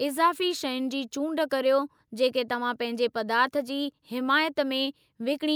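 No technical faults are audible.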